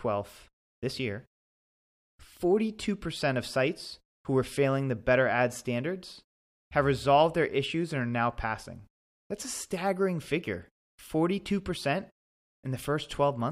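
From 0.27 to 13.24 s there are clock slip clicks: faint ticks roughly every 0.4 s, likely from two unsynced clocks drifting about 70 ppm apart.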